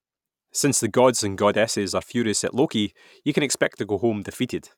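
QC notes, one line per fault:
No technical faults detected in the speech at any point.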